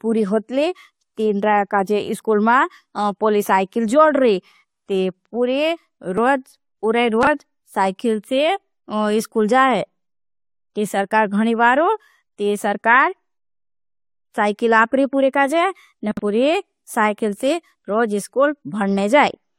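At about 2.2 s, just before "मारी पूली साइकिल जोड", the speech gives a tiny skip, and the same thing happens again at about 6.18 s. This is overlap between stream segments. The audio comes in 4-second segments whose time stamps overlap slightly, and the player trims that overlap even though the sound was never duplicated. Only a few milliseconds disappear each time, but the waveform jumps at the join.

From 7.23 to 7.27 s, right before "साइकिल से", there is a short jumbled flicker. A longer garbled patch runs from 16.11 to 16.19 s, leading into "पूरी साइकिल से रोज". These are chunks out of order. A 20 ms chunk of audio plays late, one chunk behind where it belongs at 7.2 s and three chunks behind at 16.1 s. No audio is lost, but the order is wrong, which leaves three hard joins.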